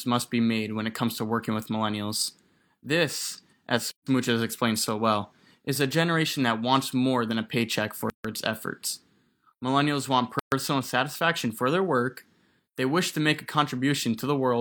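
The speech breaks three times with a gap at a join of encoded pieces. The first silence runs from 3.91 to 4.07 s, about 150 ms, just before "has explained so well". The second spans 8.10 to 8.25 s, about 146 ms, between "more than a paycheck" and "its efforts". The third runs 10.39 to 10.52 s, about 128 ms, before "satisfaction for their work". Each dropout has smeared edges. The speech then resumes where it stopped. Separately encoded segments were joined untrimmed, keeping the encoder's start delay and final-frame padding.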